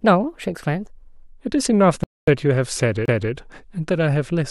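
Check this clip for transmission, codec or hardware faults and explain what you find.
Three faults are audible in this speech clip: a stretch at the wrong speed, a playback stall, and a CD skip.

Section at the wrong speed, 0 to 1.33 s: the opening runs at 1.13 times its proper rate, most likely because it was played or edited against the wrong clock. Speed and pitch rise together by roughly two semitones, so the speech sounds high and hurried until normal pace returns.

Rebuffering stall, 2.04 to 2.28 s: the player ran out of downloaded audio and waited for more. The sound drops to silence for about 240 ms, then resumes exactly where it stopped. Nothing is missing, but that much time is added.

CD skip, 3.06 to 3.08 s: the laser jumped to another turn of the disc's spiral. Playback mutes for about 30 ms, then continues from a different point, so the speech lurches abruptly rather than flowing on.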